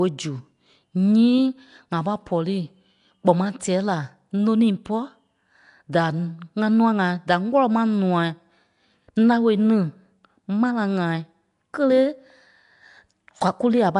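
Nellymoser compression runs through the whole speech clip, with nothing above 10.6 kHz and a rough, hissy halo and smeared, underwater quality. That likely comes from Nellymoser Asao coding, which starves weak bands and fills them with noise, consistent with roughly 44 kbps.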